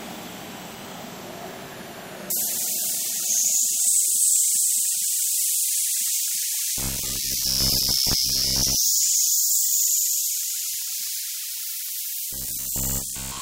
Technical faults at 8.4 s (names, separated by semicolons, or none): robotic sound from repeated short buffers